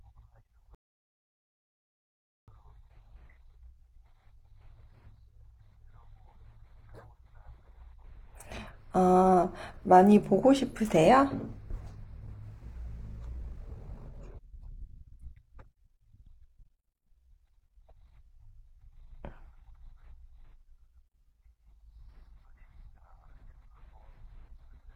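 At 0.75 s the speech drops into silence and stays there until 2.48 s. This is a rebuffering stall: the player exhausted its downloaded audio and paused until more data arrived. When playback picks up again, it continues from the exact point where it stopped, so no speech is missing. The gap simply inserts about 1.73 s of dead air into the timeline.

From 13.28 s to 18.14 s the delivery suddenly runs at roughly 1.86 times normal pace, while the pitch does not rise. The sound turns rushed. This is a time-stretched section. It was likely produced by software compressing the passage to fit a shorter duration, preserving pitch by dropping short pieces of the waveform instead of playing the whole thing faster.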